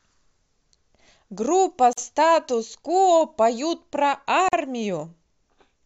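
At 1.93 s and again at 4.49 s, the speech drops into a gap at a join of encoded pieces, about 45 ms each. Separately encoded segments were joined with their encoder start delay and final-frame padding left in, so silences with codec-smeared edges cut in before the speech resumes unchanged.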